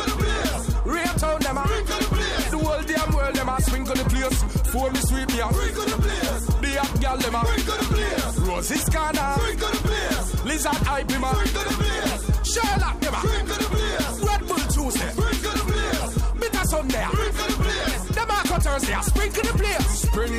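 No technical faults can be heard anywhere in the audio. Nothing in the sound calls for a timestamp or an explanation.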